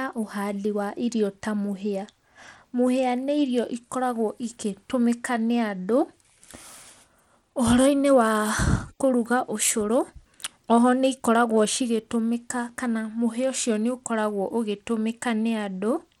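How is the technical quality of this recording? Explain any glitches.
The quality isn't great: the whole speech clip carries plainly audible codec damage. From start to finish, the treble flickers and drops out with a gritty, aliased edge, likely Bluetooth SBC compression at a low bitrate (fits roughly 96 kbps) starving the top sub-bands of bits and coarsely quantising the rest.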